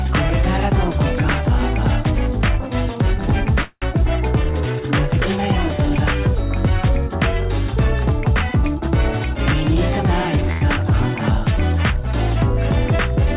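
From 3.62 to 3.84 s there is a call audio freeze. The last sound drags on as a fading buzz into about 30 ms of silence, then resumes where it stopped. This is likely from packets held up in transit.

At 10.51 to 10.63 s a short stall from a late packet stretches the last sound by about 100 ms with a slight buzz or dip. Unlike the freeze, it never fades to silence. The band limit near 4 kHz fits a G.711 A-law call path.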